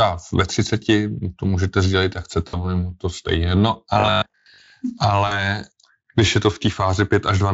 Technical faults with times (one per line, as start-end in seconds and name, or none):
2.47-2.64 VoIP packet loss concealed by the speech codec
3.94-4.72 robotic sound from repeated short buffers
5.27-5.39 VoIP packet loss concealed by the speech codec